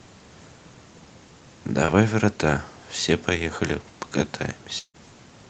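Short concealed packet loss at 1.85 to 1.94 s: about 20 ms of the call's audio arrived too late to decode, so the receiver extended the preceding sound for roughly 24 ms and blended back in. It is heard as a brief smear in the speech.

Long network dropout at 4.79 to 4.96 s: the speech turns into a fading buzz of continued sound for about 150 ms, and the last 70 ms or so are silent. The likely cause is roughly 160 ms of audio that never arrived.

Both faults sit within the Opus call path's band-limited sound, which is cut off at 8 kHz.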